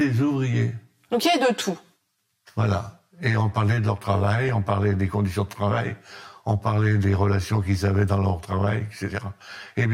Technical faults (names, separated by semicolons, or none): channel delay (comb filtering); DAB burbling